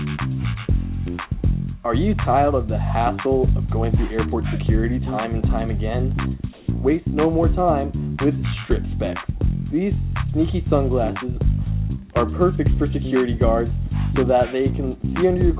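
Comfort noise in place of the background from 6.53 to 6.68 s: the real background, about 29 dB below the loudest audio, is briefly swapped for steady, featureless hiss that shifts the level by about 3 dB, likely from discontinuous transmission, with the receiver synthesising noise while the sender paused. The audio has nothing above 4 kHz, which fits a narrowband telephone codec.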